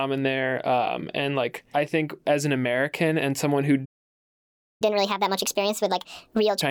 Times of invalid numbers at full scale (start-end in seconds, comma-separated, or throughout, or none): none